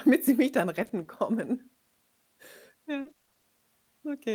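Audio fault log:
0.75–1.07 s, repeated packet loss (robotic sound): a brief choppy stutter right after "sie mich dann". Short holes of up to 20 ms, about 60 ms in all, are patched by stretching the preceding sound.
3.01–3.45 s, repeated packet loss (robotic sound): heavier chopping, with nearly half the stretch concealed. Repeated holes of up to 40 ms, totalling 200 ms, are each filled by continuing the last sound.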